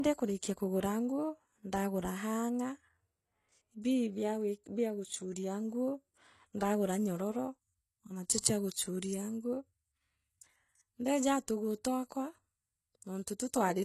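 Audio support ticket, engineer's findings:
HE-AAC compression: gritty, metallic sibilance throughout, nothing above 12.3 kHz. Likely band-replicated treble copied from lower bands, harmonics misaligned; sound points to a 16 kbps stream.

Pre-echo, 8.40–8.44 s: short hiss smeared about 34 ms ahead of an attack. Codec block noise spread into the quiet stretch before the transient.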